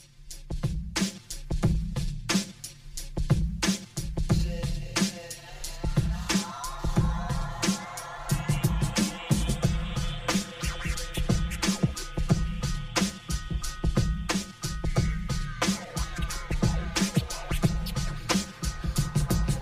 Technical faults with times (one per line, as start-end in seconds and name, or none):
0.00-19.62 channel delay (comb filtering)